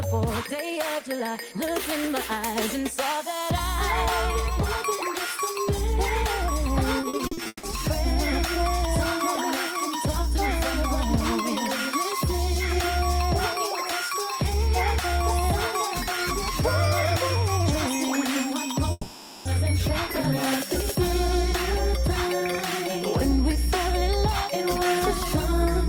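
A feedback whistle enters at 6.67 s and lasts to the end of the clip: a thin, steady tone at 5.5 kHz, well below the main sound and swelling and fading slowly in level. It likely comes from the loudspeaker-to-microphone loop sitting just at the edge of feedback. On a spectrogram it would appear as a single unbroken horizontal line at 5.5 kHz. From 7.01 to 7.65 s there is repeated packet loss, heard as choppy, robotic sound as one hole follows another. About half of that stretch is patched by repeating the previous audio, and the longest hole is 160 ms. The waveform would show a run of short, repetitive stretches with abrupt joins, and the spectrogram would show smeared, copied patches breaking up the normal detail. A long network dropout runs from 18.91 to 19.47 s. That is likely a stretch where no audio arrived. The gap is covered almost entirely by a decaying continuation of the last sound lasting about 0.54 s, with only a brief silence of about 10 ms before the audio resumes with that section missing. 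It would look like a fading, featureless band followed by a sharp restart.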